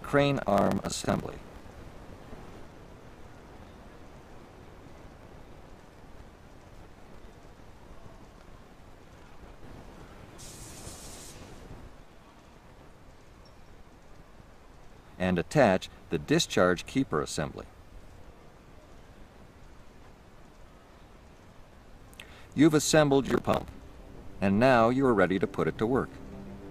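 From 0.42 to 1.65 s and again from 23.26 to 23.71 s, processor overload crackle appears. Dozens of missed buffer deadlines, fitting buffers of around 10 ms, each replay a scrap of old audio with hard edges. Unlike a single dropout, this is a gritty burst that stops once the load eases.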